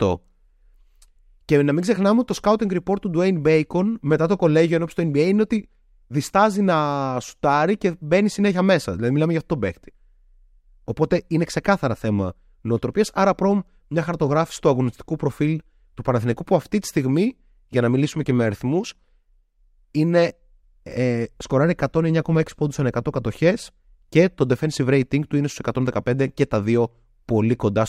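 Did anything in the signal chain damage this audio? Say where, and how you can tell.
No, nothing in the signal chain damaged this audio, and no stage left a mark that can be heard.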